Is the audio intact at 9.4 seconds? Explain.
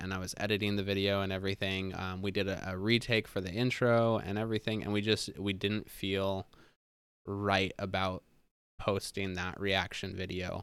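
Yes, the speech at 9.4 seconds comes through intact, with no audible fault at that moment.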